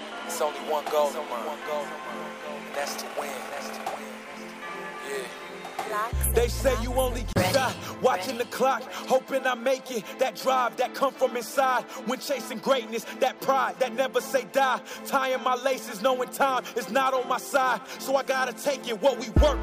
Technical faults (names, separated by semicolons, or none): CD skip